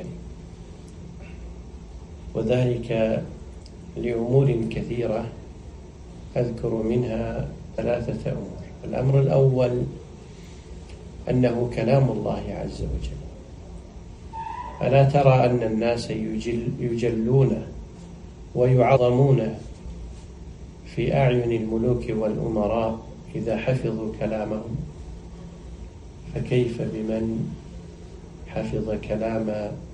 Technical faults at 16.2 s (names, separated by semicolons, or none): none